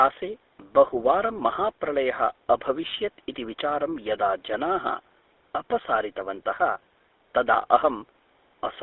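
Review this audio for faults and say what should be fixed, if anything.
The GSM full-rate codec shapes the speech for the whole clip. A buzzy, gravelly roughness is plainly audible throughout. The codec models the vocal tract and drives it with a sparse train of regular pulses. Most of the fine excitation detail is discarded. The band is squeezed to 300 Hz through 3.6 kHz, which fits a 13 kbps narrowband phone line. The call's microphone filtering sits beneath this and is not at fault.

To prevent this, carry the call over a wideband codec such as AMR-WB or Opus instead of legacy GSM.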